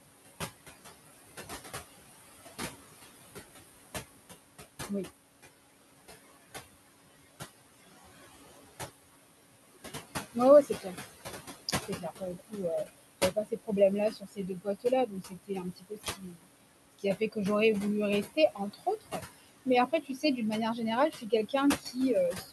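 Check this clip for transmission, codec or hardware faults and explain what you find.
Two processing faults are audible, both from a noise suppressor. Room noise sits about 10 dB below the speech.

Noise suppressor artifacts run throughout. The background drops away in pauses and swells under the talking. The suppressor pulls the noise down by about 17 dB, judging band by band and frame by frame what counts as steady noise.

Speech cut by the noise suppressor occurs from 10.34 to 10.96 s, 11.88 to 17.37 s, and 18.24 s to the end. Parts of the speech sound swallowed or faint, with drops of about 13, 22 and 19 dB. The suppressor mistakes quiet speech for noise and turns it down. The first stretch loses only a fraction of a second and the second around two seconds in total.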